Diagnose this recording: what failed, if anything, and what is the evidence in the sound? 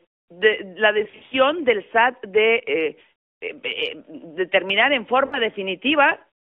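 Lost AMR speech frames, a network fault, at 1.04 to 1.37 s and 5.26 to 5.39 s. The first is scattered dropouts, the longest about 60 ms. The second is three lost frames, 60 ms in all. The decoder repeated the last pitch and vocal tract settings with falling gain, so speech smears and dips, then returns rough.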